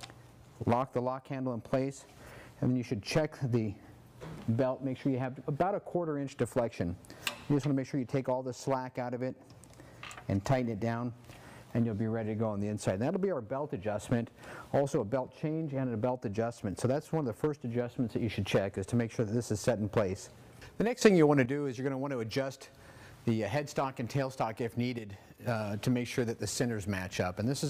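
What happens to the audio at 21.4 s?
From 21.01 s to 21.46 s the whole signal, sound and background noise alike, jumps up by about 10 dB and stays louder for that stretch. This is a sudden gain jump, likely a digital gain change applied between adjacent samples without any ramp.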